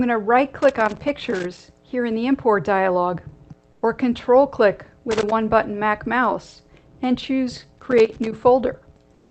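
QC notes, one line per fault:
0.59–1.62 s, 5.11–5.32 s, 7.78–8.32 s: loose connector crackle. Irregular bursts of scratching, longest in the first run. A worn contact is rapidly making and breaking, chopping the signal, and any DC on the line turns each break into a click.
3.72–3.82 s and 9.14–9.31 s: comfort noise in place of the background. The background, sitting about 37–38 dB below the loud parts, is replaced by smoother synthetic noise for 100 ms and 167 ms, about 7 dB and 4 dB quieter. The likely cause is Opus DTX halting transmission and the receiver synthesising the filler.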